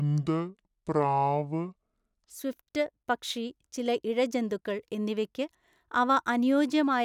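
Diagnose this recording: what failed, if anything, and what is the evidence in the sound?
The opening section, from 0 to 2.30 s, is a section at the wrong speed: it runs at 0.652 times normal rate, so the speech is slowed and its pitch drops by roughly seven semitones, sounding deep and drawn out. At 2.30 s, just before "സ്വിഫ്റ്റ് പക്ഷി ചില ഇഴജന്തുക്കൾ", speed and pitch jump back to normal together. The fault is likely at the editing or playback stage, where that segment was clocked at the wrong rate.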